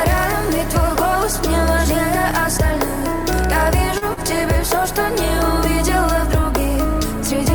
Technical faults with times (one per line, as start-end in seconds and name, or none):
3.98-4.20 short stall from a late packet